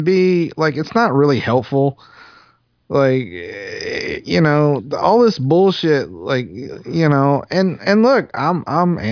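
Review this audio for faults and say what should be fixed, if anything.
Nothing stood out on listening to this speech recording, so there is nothing here that needs fixing.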